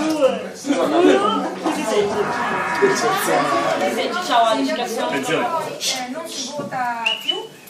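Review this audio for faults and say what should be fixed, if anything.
No faults found; nothing needs fixing.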